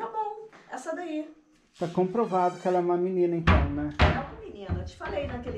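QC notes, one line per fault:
No faults were found in this audio. Nothing in it calls for a QC entry.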